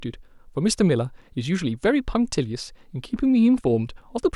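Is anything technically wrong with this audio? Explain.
No, nothing technically wrong stood out on listening to this speech clip.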